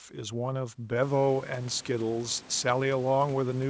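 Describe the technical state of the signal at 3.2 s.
At 3.2 s the speech is intact, with no technical fault at that moment.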